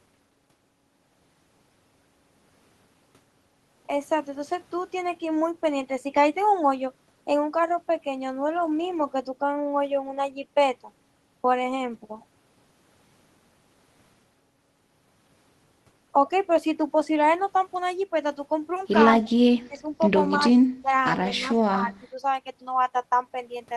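Speech suppressed in double talk at 19.22, 19.68, 20.72, 21.4 and 21.72 s: the speech dips briefly, by about 15, 20 and 25 dB in the first three and less in the last two. Likely an echo canceller, confused by simultaneous talk, turned its own talker down.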